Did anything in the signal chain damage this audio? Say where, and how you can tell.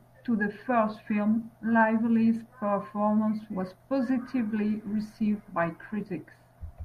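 Yes. At 4.17 s, right after "performance was", the speech abruptly changes in quality, with more codec artefacts, through to the end of the clip at 6.84 s. There's no gap or dropout at the switch. This is the network stage: an adaptive stream at a lower bitrate, where the player dropped to a cheaper encoding when throughput fell. The change in quality fits a step from roughly 64 to 32 kbit/s Opus.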